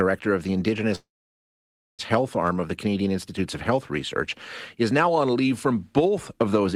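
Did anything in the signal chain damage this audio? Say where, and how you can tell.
Yes. A call audio freeze runs from 0.95 to 2.01 s, just after "of the". The last sound fades briefly, then 0.94 s of silence, and speech resumes where it stopped with nothing lost. This points to the network: packets were likely delayed until the jitter buffer ran dry, adding 1.03 s of delay.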